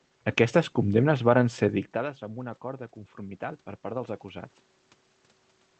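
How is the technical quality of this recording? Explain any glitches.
One system fault stands out: automatic gain rising, from 1.93 to 4.58 s, just after "condemnes vares ser". Around 1.5 s the talker moves back from the microphone and the level at the input drops by about 16 dB. The gain control answers by slowly adding about 5 dB over some two and a half seconds, so voice and room noise swell together instead of the level being restored at once. The top end stops near 8 kHz, which fits an Opus call at about 24 kbps.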